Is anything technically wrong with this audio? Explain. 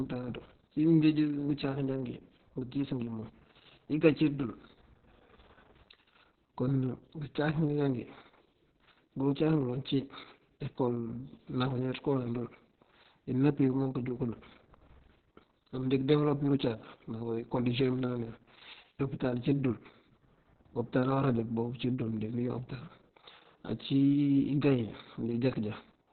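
Yes. Opus voice compression affects the whole speech clip. There is no content above about 4.3 kHz, the narrowband limit of Opus's SILK linear-prediction mode. The heavy damage points to a very low bitrate, around 6 kbps. At that rate the coder discards the upper band and codes the excitation signal coarsely. The speech therefore sounds muffled and telephone-like, with a hoarse, slightly robotic buzz in place of natural breathiness and detail.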